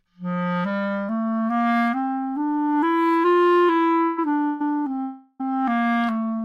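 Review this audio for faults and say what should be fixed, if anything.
Call audio freeze at 4.05–4.19, 4.46–4.61 and 5.01–5.41 s (136, 143, 385 ms) stretches the last sound into a fading buzz, seen as horizontal smears on a spectrogram, likely from delayed packets starving the jitter buffer. A larger adaptive jitter buffer and a steadier network path would prevent it.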